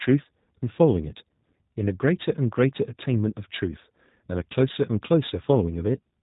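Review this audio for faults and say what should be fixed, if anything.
G.729 codec, throughout: speech is rebuilt from a vocal tract model and sparse pulses, sounding rough and synthetic, with nothing above 3.8 kHz. This fits 8 kbit/s G.729A. To prevent it, carry the call on a wideband codec such as G.722 or Opus at a higher bitrate.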